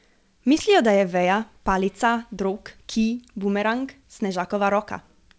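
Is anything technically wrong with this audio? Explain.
Yes, there is one brief fault. Short concealed packet loss occurs at 0.58 to 0.61 s, just before "da je veja palica". About 20 ms of the call audio did not reach the decoder in time, so the receiver improvised roughly 15 ms by extending the preceding sound and then crossfaded back into the real signal. It is heard as a quick smear or wobble right at the onset of that phrase. The audio itself stops at 8 kHz, which fits a wideband call codec such as G.722.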